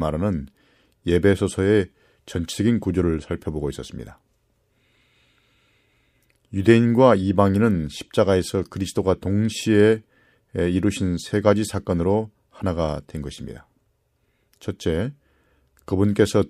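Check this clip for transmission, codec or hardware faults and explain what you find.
No transmission, codec or hardware faults can be heard in this speech recording; the signal stays continuous and intact throughout.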